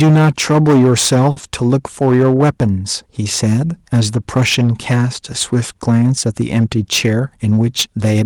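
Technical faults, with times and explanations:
Throughout, hard clipping: every loud moment carries a harsh, gritty fuzz. The signal was driven about 11 dB past what one stage could pass, so roughly one sample in fifteen has its peak sliced flat, and those flat tops spray harmonics high into the spectrum.
1.31 to 1.38 s, short stall from a late packet: one sound hangs on unnaturally for 50 ms. A packet arrived late, the jitter buffer ran dry, and the receiver stretched the last sound by 50 ms. Nothing was lost, but the delay grew by 50 ms.
1.40 to 1.44 s, short concealed packet loss: a brief smear where the sound briefly wobbles instead of moving on. 20 ms of audio never reached the decoder, so the receiver invented a continuation of the preceding sound to fill the gap, then blended back into the real signal.
7.06 to 7.53 s, jitter buffer speed-up: the speech rushes forward at 108 percent speed while its pitch stays unchanged. 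With excess audio queued, the receiver trimmed small pitch-period slices repeatedly, discarding about 50 ms in total to bring the delay back down.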